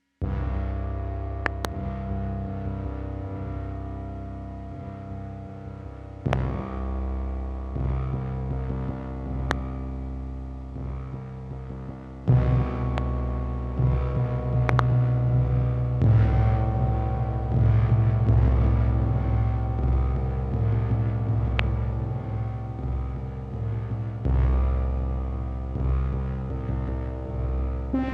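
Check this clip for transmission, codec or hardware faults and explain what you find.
Loud pops occur six times, at 1.46–1.67 s, 6.33–6.35 s, 9.51–9.53 s, 12.98–13.00 s, 14.69–14.81 s and 21.59–21.61 s. The first and fifth are double pops; the rest are single. A sudden voltage step or pulse, likely from a plug, switch, static discharge or driver glitch, was added to the signal. Each sounds like a sharp pop or thump roughly 20 dB above the sound, about 15 dB at 12.98 s, while the audio continues underneath.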